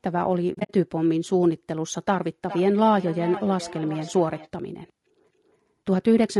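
Across the whole clip the speech sounds rough and grainy, with noise filling the gaps between harmonics and a thin, synthetic top band. This is most likely low-delay AAC compression such as AAC-ELD, whose short frames resolve pitch poorly and whose damage fits a bitrate near 32 kbps.

From 0.53 to 0.71 s there is AAC frame loss with muting. About 120 ms of audio is zeroed across a 160 ms span, the longest gap around 70 ms. The overlapping windows fade each hole in and out, so the dropouts are soft-edged.

From 2.49 to 4.5 s a feedback echo between two devices appears. A second device replays the call audio into a microphone, and the sound returns at roughly 0.4 s intervals. The repeats peak at about -14 dB relative to the speech and grow thinner and more ringing each time.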